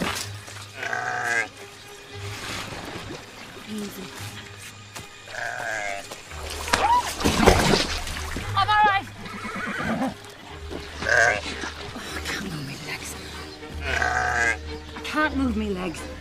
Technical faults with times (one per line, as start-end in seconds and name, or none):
3.56-4.02 DAB burbling